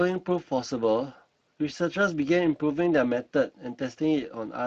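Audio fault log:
throughout: Speex codec. The speech sounds plainly hoarse and noisy, with a grainy roughness clinging to every sound. The codec models the voice from too few bits for its excitation signal, leaving that rasp, a degree of damage that fits a bitrate around 22 kbps.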